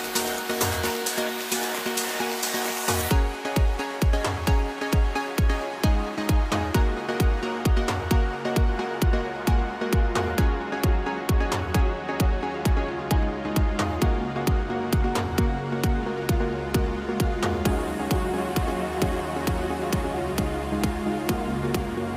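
No technical faults are audible.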